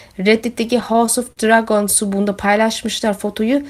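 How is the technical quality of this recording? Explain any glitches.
The recording has one glitch. Between 0.67 and 1.40 s there are repeated stalls (stutter): audio arrived too slowly, so playback paused six times, the longest about 44 ms, stretching the last sound to fill roughly 92 ms in total. Unlike dropouts, nothing is lost; the speech simply drags and hiccups.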